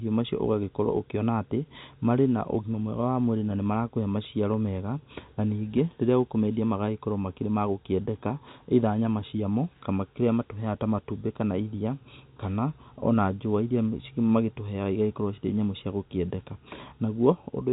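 No technical faults can be heard in this speech. It has the narrow sound of G.711 telephone coding, with nothing above about 3.8 kHz, which fits an A-law line at 64 kbps.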